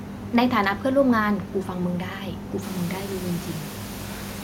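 The speech recording has no technical fault, and the room noise in the background, which rises by about 17 dB around two and a half seconds in and stays about 18 dB below the speech, belongs to the recording space rather than the system.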